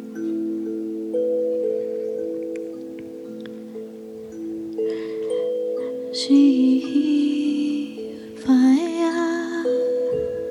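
No technical faults can be heard anywhere in the clip. The audio runs without any break, glitch or disturbance from the system carrying it.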